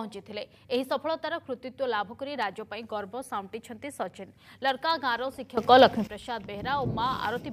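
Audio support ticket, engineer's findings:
Sudden gain jump, 5.57 to 6.07 s. Sound and noise floor rise together by about 16 dB, then return. Likely an unramped digital gain step or bit shift.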